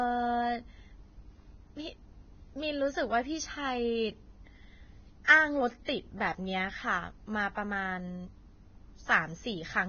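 All the way through, the speech sounds hissy and grainy, with nothing above 6.5 kHz and rough, smeared detail in what's left. That's likely heavy Vorbis compression, the kind of damage that fits a very low bitrate somewhere near 17 kbps, where the treble gets quantised so coarsely it turns into noise. Then there's pre-echo at 5.24 s and again at 5.86 s: a short hiss, about 44 ms and 32 ms long, creeps in ahead of sharp attacks because the codec spread its noise across the whole block, so those onsets come out soft.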